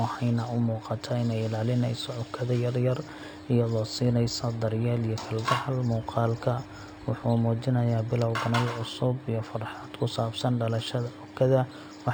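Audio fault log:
throughout: imaging from linear upsampling. The speech was raised from 12 kHz to 48 kHz by straight-line interpolation, which filters weakly. The top of the original band sounds dulled, and faint mirrored copies, the first spanning 6 kHz to 12 kHz at about 25 dB down, add a light metallic shimmer on sibilants. A spectrogram shows ghostly reflected energy above the true band.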